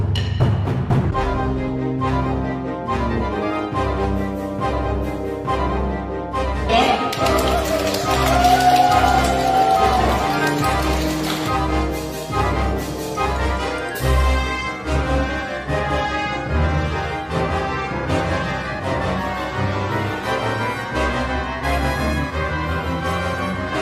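No technical faults can be heard at any point in the recording.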